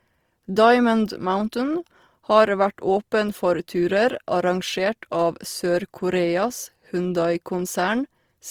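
The speech was likely squeezed through Opus compression in its music-oriented CELT mode at a rate that fits about 24 kbps, too few bits to code every band properly. Across the whole clip, starved bands are filled in, leaving the sound plainly grainy, rough and noisy.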